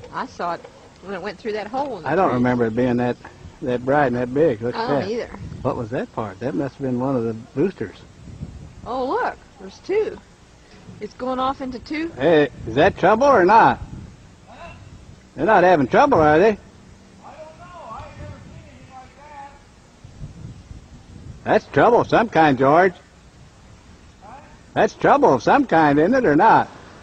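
No technical faults can be heard anywhere in the audio, so there is nothing to describe in time order.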